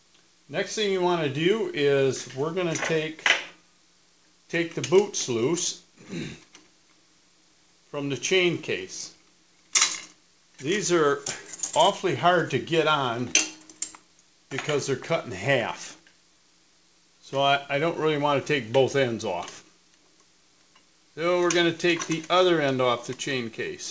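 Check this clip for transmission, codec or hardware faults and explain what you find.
Nothing here needs fixing: the audio simply tops out around 8 kHz, which is just what you'd expect from a wideband call path and fits a G.722 codec at 64 kbps, and there's nothing else to flag.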